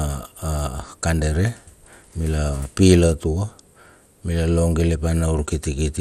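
A speech recording that sounds dull throughout, with a gurgling, granular roughness and upper frequencies flickering in and out. Nothing is present above 15.6 kHz. The likely cause is MP2 compression at a low bitrate, around 80 kbps, starving the upper sub-bands of bits.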